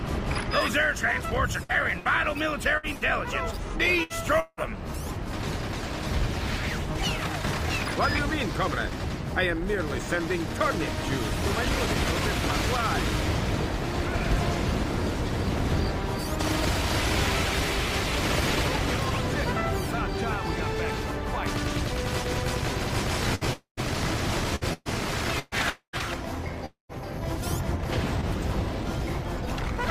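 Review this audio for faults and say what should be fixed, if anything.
Repeated packet loss (robotic sound) occurs at 1.63–3.04 s (six gaps, longest 60 ms) and 23.35–26.03 s (seven gaps, longest 123 ms). Each gap is filled by extending the previous sound, giving choppy, robotic audio.

A burst of packet loss at 4.03–4.13 s removes about 60 ms. The last sound is held and faded, then audio resumes past the gap.

Four gaps at 4.40–4.60, 23.53–23.80, 25.70–25.96 and 26.66–26.92 s point to a likely long network dropout. Each is 180–240 ms of lost audio, concealed as a fading tail and then silence.

Prevention: increase jitter-buffer depth, enable forward error correction, and prioritise or stabilise the network path to cut loss and late arrival.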